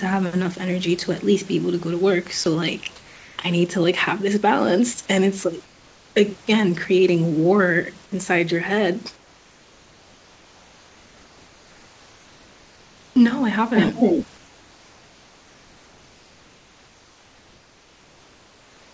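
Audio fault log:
2.44 s, sound dropped by the voice detector: a 20 ms sliver of speech vanishes and a brief patch of steady noise takes its place. The sender's voice detector likely treated that quiet moment as background and stopped transmitting, so the receiver filled the gap.
2.96–3.38 s, 5.64–6.16 s, 9.16–13.16 s, 14.38–18.93 s, comfort noise in place of the background: in each pause the real room background, sitting about 27 to 32 dB below the speech, becomes a smooth, featureless hiss roughly 3 dB quieter. This likely comes from discontinuous transmission, with the receiver synthesising noise while the sender sends nothing.
13.75–14.27 s, echo leak: a copy of the speech returns about 300 ms late, at roughly the same loudness as the original, so it sounds like a second voice trailing the first. Likely cause: a loudspeaker at the far end whose echo canceller let its own playback back into the microphone.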